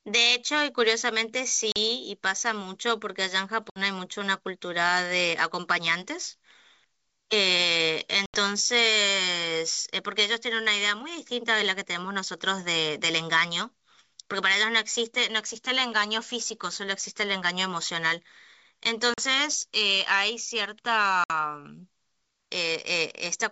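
Hard-edged silent gaps cut the speech at 1.72 s (40 ms), 3.70 s (60 ms), 8.26 s (80 ms), 19.14 s (40 ms) and 21.24 s (60 ms). Each is followed by a short stretch of slightly distorted sound. This is packet loss on an ADPCM call: a few packets vanish and are filled with silence, leaving the decoder's predictor and step size out of step with the sender's until they resettle.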